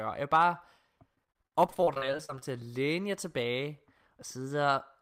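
From 1.15 to 2.42 s the speech turns choppy before "til at læne jer": repeated packet loss. Twenty-one short holes, none over 45 ms, are patched by stretching the preceding sound, covering about a third of the stretch. Unlike a single dropout, these gaps recur rapidly, giving a choppy texture with pieces missing.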